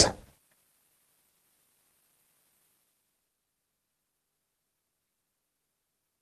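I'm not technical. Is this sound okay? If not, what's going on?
No, there's a glitch right around 1.3 seconds, where a bit of the call went missing on its way to you.

First comes a burst of packet loss from about 1.29 to 1.37 s. A chunk of the sound never arrived, so the receiving end stretched the last bit it had and faded it out for about 60 ms. When the sound picks back up, that stretch is simply gone.

Right after that come two short concealed packet losses, at about 1.37 to 1.41 s and 1.41 to 1.45 s. Each one is a tiny gap of about 20 ms that was patched over by continuing the sound and blending back in. You'd hear a quick smear or wobble, and a very short sound can drop out completely.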